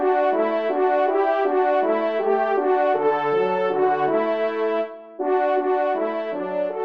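Nothing in the audio stood out as a technical problem on listening.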